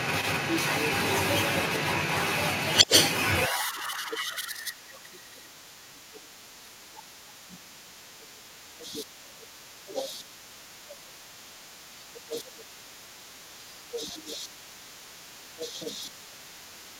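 A speech clip in which the far end's voice is leaking through the whole way, from 0.0 to 16.99 s, and sits at roughly the talker's own level or a little above it. The talker's device is likely playing the other side on a loudspeaker with the echo canceller leaving much of it in the microphone signal. What separates this from crosstalk or a second person in the room is that the leaked voice is the conversation's own return path, arriving as a competing voice rather than a wiring bleed or nearby talker. Speech suppressed in double talk appears from 2.87 to 11.08 s, where the talker's voice dips by up to about 15 dB across roughly four seconds in total, and again from 12.1 to 16.54 s, with drops up to about 10 dB over roughly two seconds. Both sides were likely talking at once, so the canceller pulled down everything it could not separate. Unlike a plain network dropout, these dips follow the overlap with the far voice.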